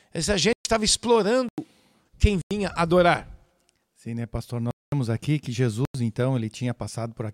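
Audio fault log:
0.53–5.94 s, block of digital silence: the speech cuts out and returns with no fade at 0.53–0.65 s (121 ms), 1.49–1.58 s, 2.42–2.51 s, 4.71–4.92 s (213 ms, between "né pastor" and "aqui que") and 5.85–5.94 s (after "aqui que"). The three 93 ms holes fit a 4096-sample buffer left unfilled in time. Each hole shows as a flat line in the waveform and as a blank vertical band on a spectrogram.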